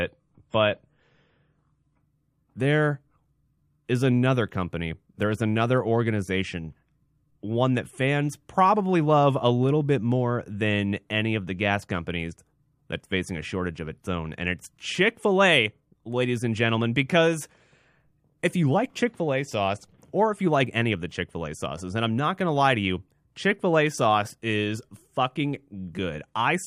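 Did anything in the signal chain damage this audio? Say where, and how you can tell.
Yes: adaptive stream starting at a low bitrate, 0 to 2.0 s, at the network stage. Nothing above 10.3 kHz, fitting 32 kbit/s MP3, then quality jumps without a gap once bandwidth was measured.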